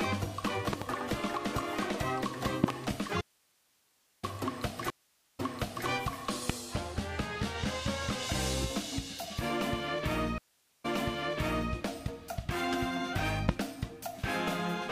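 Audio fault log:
0.73–0.84 s, 2.64–2.73 s, 6.50–6.52 s, 13.49–13.51 s: loud pop. The first two are double pops and the last two single, peaking about 20 to 25 dB above the sound, which carries on underneath. They are likely voltage pulses from a plug, switch, static or driver glitch, shaped by the circuits after them.
3.21–4.23 s: audio dropout to a faint residue. About 1.02 s of signal cuts out abruptly, leaving only hiss about 40 dB down. This is likely a break in the wanted signal while the path after it stayed live, so its noise floor remains audible.
4.90–5.88 s, 10.38–11.73 s: stream reconnect. The connection breaks, giving 0.49 s and 0.46 s of silence. A fresh decoder then restarts mid-stream, and the server's resent burst makes the audio resume 0.49 s and 0.88 s earlier, repeating material already heard.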